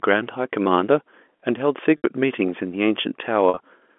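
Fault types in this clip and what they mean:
Packet loss with pitch repetition: twice, 70 ms of packets went missing and the receiver looped the last pitch period, leaving brief buzzy holds near 1.97 and 3.49 s.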